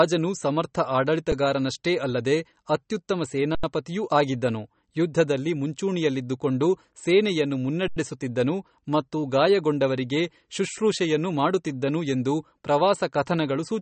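It's a speech recording with a watery, swirly quality all the way through and nothing above 8.4 kHz, which is likely MP3 compression at a low bitrate, something in the 35 kbps range. The encoder is dropping weak detail frame by frame and capping the treble. There are also two underruns with a held sample, at 3.55 s and 7.88 s, each about 85 ms long, which fits a 4096-sample buffer. The output freezes flat on its last value, then picks up right where it left off, so nothing is skipped and the restart is soft.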